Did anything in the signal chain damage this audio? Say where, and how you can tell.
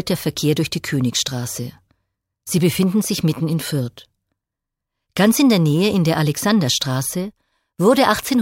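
No, nothing I can hear points to damage at any stage of the chain, from capture through to playback.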